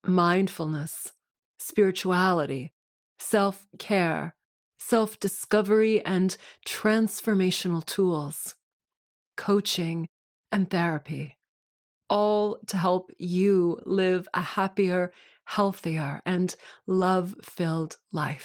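Lost packets rebuilt from error correction occur at 4.95 s (between "mindfulness spirituality self care" and "discovery and transformational tools"), 11.25–11.31 s (after "coaching and"), 13.87–13.89 s (between "all to help you" and "a happier"), 15.77 s, and 16.97–17.03 s. Each missing stretch, 20 ms at the single points and 40 ms at the longer two, is filled by a lower-bitrate copy carried in the following packet. There is no gap, but those moments sound briefly rougher and noisier than the surrounding speech.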